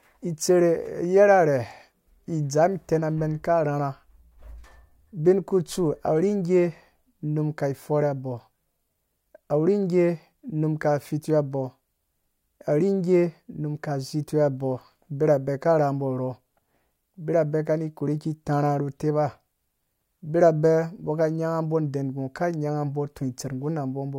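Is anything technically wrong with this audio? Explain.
No, nothing technically wrong stood out on listening to this speech recording.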